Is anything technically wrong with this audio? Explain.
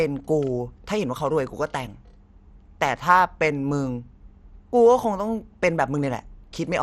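Yes. Throughout the speech there's plainly audible damage that sounds like MP2 compression, likely run at a low rate, something in the region of 64 kbps. Layer II divides the signal into 32 sub-bands and shares out bits among them. When bits run short, upper bands drop out entirely and the rest get coarse quantisation. Here nothing comes through above 14.3 kHz, so the top end feels dull, with a gurgly, grainy edge on the speech.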